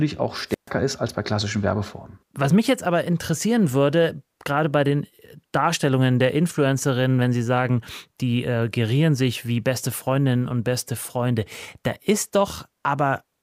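At 0.48 s a short burst of hiss rises over the speech, then the output falls into a hole of near silence lasting about 134 ms before the speech comes back by 0.71 s, just ahead of "ist als bei klassischen". This is a wireless microphone squelch dropout: the radio link from an analogue FM transmitter weakened, the receiver's noise grew as the carrier faded, and its squelch muted the output until the signal recovered.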